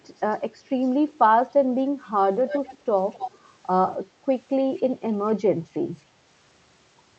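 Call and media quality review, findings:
Delayed ghost copy of the speech, 262 ms behind, at 0.18–0.36, 2.47–2.78, 3.13–3.38, 4.77–4.82 s, loudest near 2.5 s. Echo leak: likely far-end echo canceller passing loudspeaker pickup.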